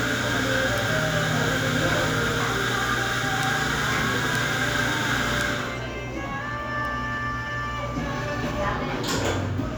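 Sharp, broadband ticks at 0.78, 3.43, 4.35, 5.41 and 6.85 s are bit error spikes. A flipped bit briefly jumps samples to about -8 dBFS, and the last to about -20 dBFS.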